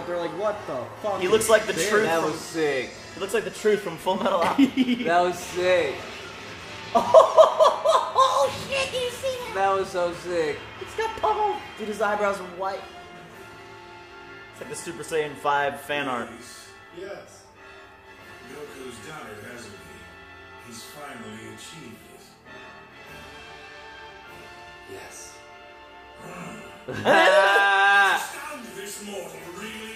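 From about 27.47 s right through to the end, there's pre-emphasis left on. The treble boost matching the CD 50/15 µs curve never got its de-emphasis cut, so 10 kHz sits about 8 dB hotter relative to 1 kHz, leaving the sound thin, bright and edgy with exaggerated sibilance.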